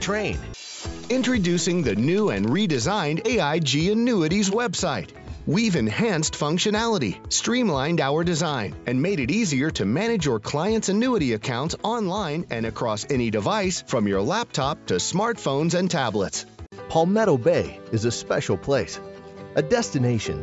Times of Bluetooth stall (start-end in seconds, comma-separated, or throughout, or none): none